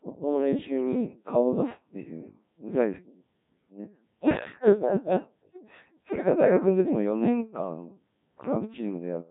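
The speech passed through a Codec 2 vocoder for its whole length. Only pitch, voicing, energy and a coarse spectral envelope survive, with the heavy damage fitting a rate near 1.3 kbit/s. Resynthesised from sine waves, the voice sounds robotic and buzzy, with nothing above 3.8 kHz.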